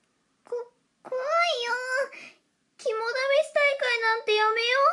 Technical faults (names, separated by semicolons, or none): wrong sample rate